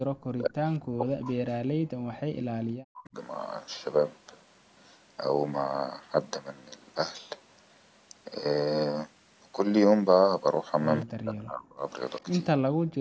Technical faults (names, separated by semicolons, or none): speech suppressed in double talk; echo leak